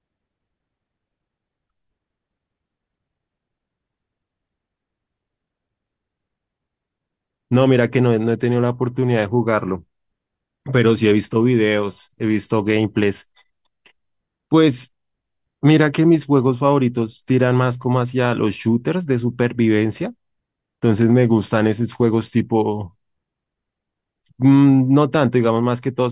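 No technical faults are audible.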